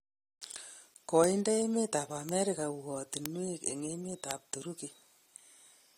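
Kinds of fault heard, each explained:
Bit error spike: at 2.29, 3.26 and 4.31 s, a flipped bit briefly throws the sample value by a power of two, giving one sharp broadband tick.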